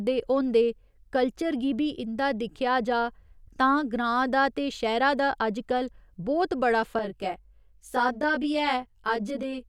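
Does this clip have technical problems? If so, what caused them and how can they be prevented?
Yes. From 6.99 s to the end at 9.68 s, just after "दा अजकल बहुत बड़ा", the speech turns rough and slightly doubled. This is channel delay (comb filtering). One channel lags the other by about 20 ms. Summing them to mono cancels evenly spaced frequencies, starting around 30 Hz. To prevent it, align the channels before any mono fold-down.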